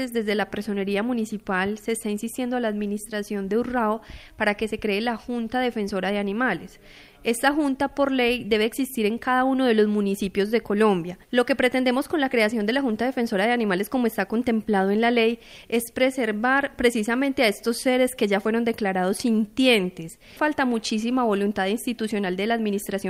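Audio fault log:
No faults detected in this audio.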